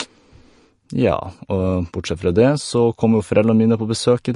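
MP3 compression throughout: the speech has nothing above 10.6 kHz and plainly audible watery swirl, likely an encoder short of bits, consistent with a bitrate near 40 kbps.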